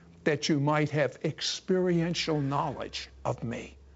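No technical faults can be heard at any point in this speech clip.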